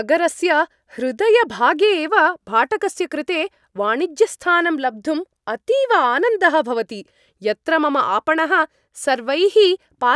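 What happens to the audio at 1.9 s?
Nothing goes wrong at 1.9 s: the speech carries on intact through that moment, with no dropout, click or distortion.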